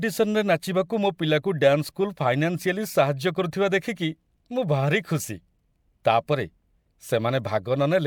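No technical faults can be heard anywhere in this speech.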